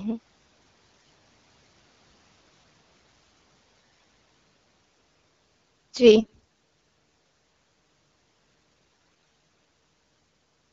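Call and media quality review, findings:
AMR bit errors: short hoarse, gargly bursts at 0.99–1.09 s, 3.80–4.05 s, 6.17–6.40 s (harshest) and 8.85–9.29 s over clean AMR-WB speech. Corrupted weakly protected bits garble excitation and fine parameters. Unlike packet loss, pitch and level hold, with no gaps.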